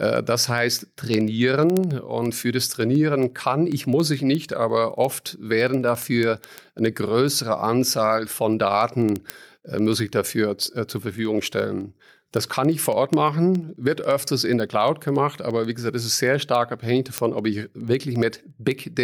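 Word clock ticks run through the speech from 0.16 to 18.99 s, roughly every 70 ms: an unlocked receiving clock, around 300 ppm off, slips a sample each time.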